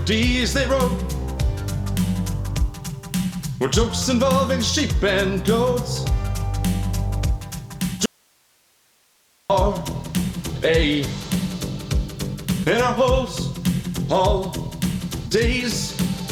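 Audio dropout to a faint residue, 8.06 to 9.50 s: the sound cuts abruptly for 1.44 s, leaving only hiss about 40 dB down, likely from a broken signal feed while the path stayed live.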